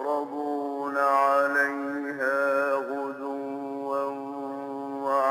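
No technical faults are audible anywhere in the clip.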